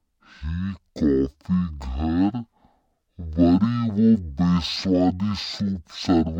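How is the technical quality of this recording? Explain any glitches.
The recording has a serious technical fault throughout. A stereo signal has been read as mono, so the speech plays at half speed and exactly an octave low. The left and right samples were taken one after another as a single channel. Speed and pitch drop together, unlike a pitch shift that keeps the timing.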